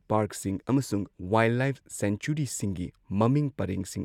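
No technical faults can be heard anywhere in this recording.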